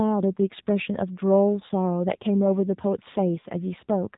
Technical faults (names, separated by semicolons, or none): AMR narrowband mobile codec; lost AMR speech frames